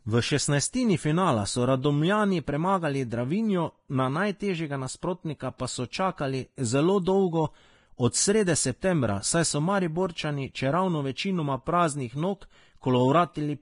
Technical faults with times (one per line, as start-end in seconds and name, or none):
0.00-13.61 Vorbis compression